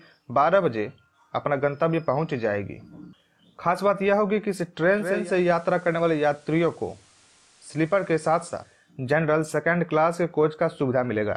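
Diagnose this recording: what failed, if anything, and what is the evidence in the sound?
The receiver failed: digital radio blending to analogue, from 4.91 s to 8.93 s. Over a 430 ms cross-fade the sound drops about 1 dB and gains a steady hiss roughly 35 dB down, then fades back. That is the hybrid tuner falling back to the station's FM signal. A codec low-pass would not bring hiss, and a dropout would cut abruptly rather than cross-fade both ways.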